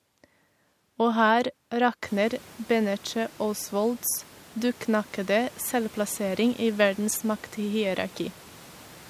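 The signal carries no technical faults, and the room noise behind the speech, which rises by about 24 dB at around 2 s and then sits about 26 dB below the speech, comes from the space the microphone was in rather than from the system.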